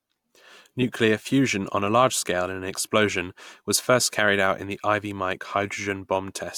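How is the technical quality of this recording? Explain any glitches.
No glitches or technical faults can be heard here.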